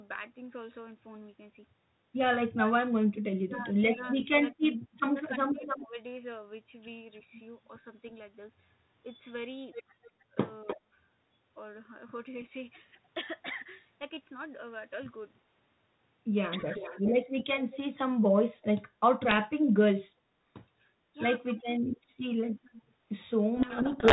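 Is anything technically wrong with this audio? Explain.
Yes, the clip has three kinds of fault.

Speech suppressed in double talk occurs from 3.45 to 5.99 s (about a second in total), at 10.76 to 10.92 s and at 16.65 to 17.02 s. The likely cause is an echo canceller turning the talker down along with the far side's echo. The level dips by up to about 25 dB in the first two, and about 10 dB in the last. A waveform shows sudden notches, and a spectrogram shows brief dark gaps.

Echo leak appears at 5.6 to 5.85 s, 10.03 to 10.77 s and 16.61 to 18.65 s. A delayed copy of the speech follows at 300 ms in the first two and 389 ms in the third. It sits about 5, 10 and 15 dB below the speech, likely from a loudspeaker echo the canceller failed to remove. A spectrogram shows offset repeats of the speech patterns.

A codec payload misread runs from 23.56 s to the end. The decoder reads the G.726 code words with their bit order reversed, so harsh distortion buries the speech. 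A spectrogram turns to broadband, noisy smear across the telephone band, and the waveform becomes dense and jagged.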